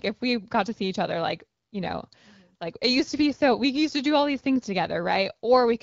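No faults: the speech runs over an AMR wideband (HD Voice) link at 12.65 kbit/s, which leaves only the light, expected traces of that codec.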